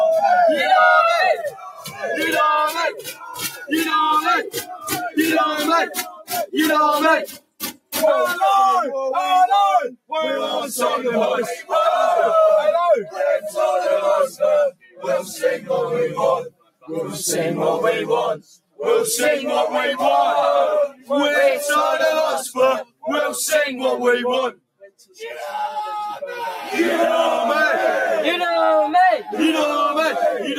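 The two channels are drifting apart throughout. Their clocks disagree by a few hundred parts per million, so the gap between them slowly grows to roughly 10 ms by the end. Heard in mono, this gives a slow, sweeping flanging as comb notches glide through the spectrum. A noise suppressor built for speech has been applied to this sound. It treats held tones and ambience as noise, so the level pumps by a few decibels. Attacks survive while sustained parts and tails thin out. In five places the sound is cut by the noise suppressor much harder. This happens at 1.49 to 7.93 s, 14.72 to 16.89 s, 18.57 to 18.79 s, 20.93 to 21.1 s and 22.85 to 25.16 s. The drops reach about 18 dB, except about 10 dB at 20.93 s and about 19 dB at 22.85 s. Steady or decaying material sinks or is clipped short there.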